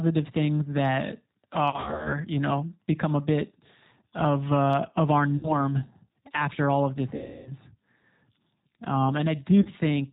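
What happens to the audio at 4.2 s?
At 4.2 s the speech carries the same G.729 codec coloration heard across the whole clip, with no separate event at that moment. The codec rebuilds each 10 ms frame from a vocal tract filter, a pitch predictor and a few pulses, so nothing above 4 kHz survives and the voice turns plainly rough and synthetic, which fits an 8 kbit/s codec. A simple telephone band-limit would only sound muffled. This adds buzzy, artificial texture.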